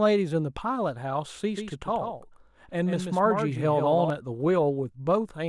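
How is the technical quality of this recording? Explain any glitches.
The recording has one glitch. From 1.56 s to 4.10 s the speech has a doubled audio track. A second copy trails roughly 150 ms behind, a few decibels quieter, with no room colour. It likely comes from the same signal captured again through a slower path. The copy starts and stops abruptly.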